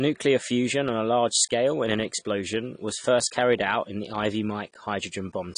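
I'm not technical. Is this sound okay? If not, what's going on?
No. All the way through, the speech sounds dull and smeared, as if heard through a thin wall, with a plainly audible watery, fizzy edge on the hiss of sounds like s and sh. Nothing comes through above about 10 kHz, so the crisp top end is missing. This is most likely AAC compression, a common way of shrinking audio files: when squeezed too hard, it throws away fine detail and the highest frequencies to save space.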